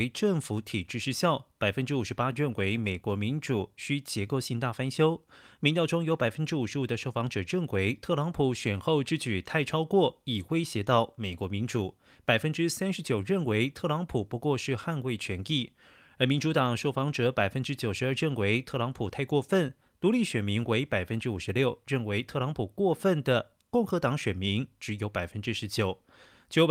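Nothing in this recording stands out as a technical fault at any point, so there's nothing to flag here.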